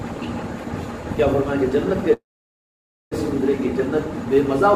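At 2.13 s the sound briefly smears, then drops to silence for almost a second and resumes at 3.13 s intact but late. This call audio freeze likely came from delayed packets draining the jitter buffer.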